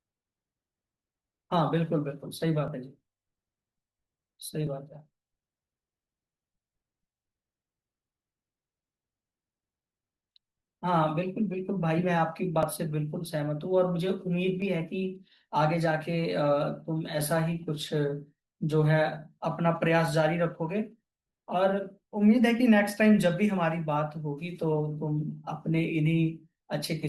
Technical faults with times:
2.68 overlap between stream segments
4.67 overlap between stream segments
12.63 overlap between stream segments
14.62 overlap between stream segments

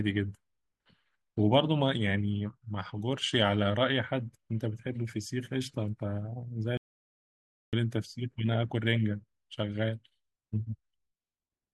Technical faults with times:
6.77-7.73 audio dropout to silence

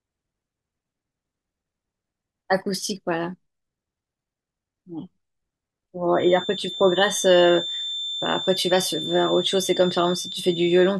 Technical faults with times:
6.10-10.99 feedback whistle

